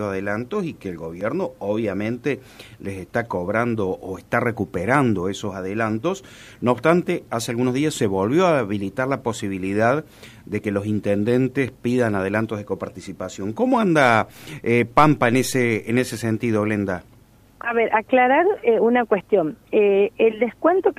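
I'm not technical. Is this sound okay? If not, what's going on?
No. There's a tiny click or skip at 1.21, 7.22, 13.2 and 19.21 seconds, one every six seconds. That's an overlap between stream segments: the six-second pieces claim overlapping times, so the player trims a sliver at each join and the sound jumps.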